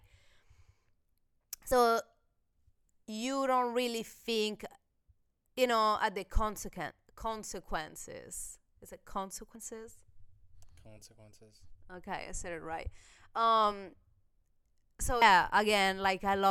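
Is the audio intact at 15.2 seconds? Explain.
No. At about 15.22 s there are compressed frames skipped. Whole blocks of the coded audio never reach the output, either because they're missing or because the decoder rejected them as damaged, so playback jumps ahead by roughly a fifth of a second of speech. That fits around seven 32 ms frames dropping out. The join comes across as a short glitch where the speech jumps ahead.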